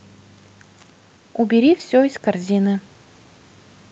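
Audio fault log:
No faults found; the speech arrives over a WebRTC call path with Opus at 32 kbps, its band topping out near 8 kHz as that coding setting gives.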